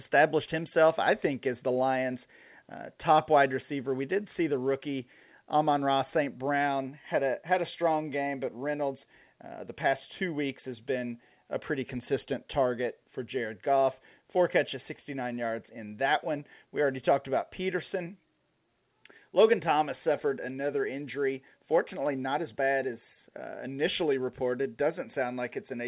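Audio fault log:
No faults found in this speech recording.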